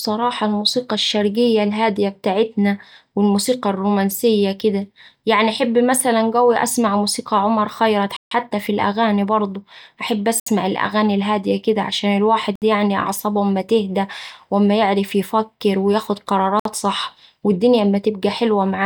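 At 8.17 s the speech drops out completely for about 150 ms, then resumes abruptly. Shorter gaps of the same kind follow at 10.40 s (67 ms), 12.56 s (64 ms) and 16.60 s (58 ms). Each is a clean cut to silence with no fade, consistent with a Bluetooth stall: radio interference likely delayed packets, the receiving buffer emptied, and playback halted until retransmitted audio arrived.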